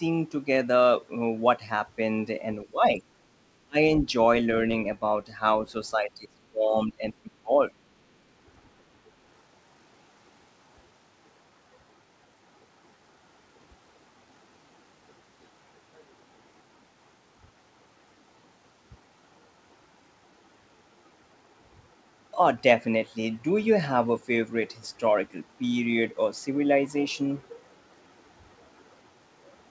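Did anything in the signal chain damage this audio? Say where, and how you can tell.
Yes. Speech suppressed in double talk at 2.64–2.99 s, 3.65–3.78 s and 5.95–7.52 s. The speech level sags by roughly 15 dB, then collapses by about 35 dB, then drops around 20 dB in broken stretches over about a second. The likely stage is call processing: the echo canceller, facing simultaneous talk, mistook the near talker for loudspeaker echo and attenuated both. The whole clip is band-limited with nothing above 8 kHz, which fits a wideband G.722 call codec.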